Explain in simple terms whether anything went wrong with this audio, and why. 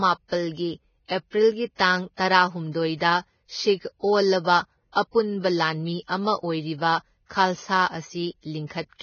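The speech sounds hissy and grainy throughout, with nothing above about 6.6 kHz. This is likely Vorbis compression squeezed hard, discarding treble and coarsening detail.

From 1.75 to 1.79 s, a brief hiss arrives just before a sharp sound. This is pre-echo: the codec's noise spread backwards across roughly 42 ms, blurring the attack.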